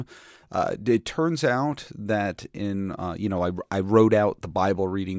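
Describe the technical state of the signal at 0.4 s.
At 0.4 s the speech signal is intact, with no audible technical fault at that moment.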